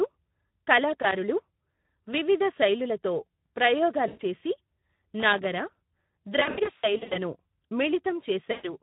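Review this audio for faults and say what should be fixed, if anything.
Speex codec damage runs through the whole clip: the speech sounds hoarse and noisy because the coder starves the excitation, which fits a low setting around 11 kbps. Raise the Speex quality setting or switch to a modern codec like Opus.

There's a loose connector crackle at 1.02–1.12 s, a short scratchy burst where a worn contact made and broke the signal. Reseat or replace that cable and clean the contacts.

VoIP packet loss concealed by the speech codec shows up at 4.07–4.22 s, 6.39–7.19 s and 8.51–8.74 s. The decoder stretched its last pitch and filter into a buzzy tone or coloured noise that faded, leaving the speech weak until it recovered. The middle stretch is scattered, short dropouts over about 760 ms. Add jitter buffering or forward error correction, and check the network path for loss.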